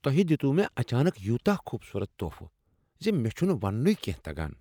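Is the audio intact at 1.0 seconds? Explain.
Yes, the speech at 1.0 seconds is intact, with no dropout, click, distortion or other fault at that moment.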